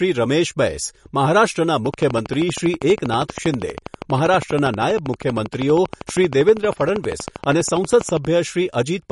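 Right from the start, the speech carries MP3 compression damage that's easy to hear. Nothing gets through above about 11.1 kHz, so the top end sounds clipped off, and the quieter detail has that watery, swirling quality you get when the encoder is starved and drops weak frequency lines frame by frame. The sibilants come out a bit metallic and the consonant attacks are smeared, which fits a low bitrate of around 40 kbps.

Then from 1.86 s to 8.26 s there's a train of clicks ticking over everything, pauses included. They're evenly spaced at 12.5 per second, about seventy of them, all much the same shape, and they jump out at roughly 10 dB above the speech. A regular pulse stream like that is most likely interference from nearby equipment or a faulty connection or power supply, rather than anything in the recording itself.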